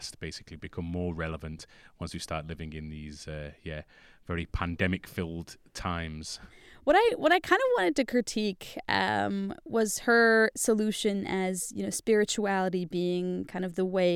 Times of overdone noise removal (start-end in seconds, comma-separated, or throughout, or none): none